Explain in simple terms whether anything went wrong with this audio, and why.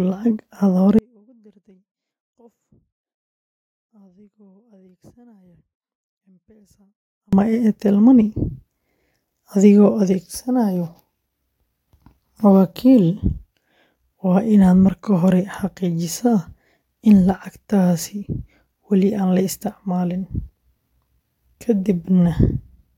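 At 0.99 seconds the speech suddenly drops away, and it snaps back at 7.33 seconds, so about 6.3 seconds are missing. This is an audio dropout to a faint residue. During the gap a very faint trace of sound remains, far quieter than the speech. A natural pause or a fade would ease in and out, but this cut is instant at both ends. The likely cause is that the signal was lost for a while as the recording chain kept running.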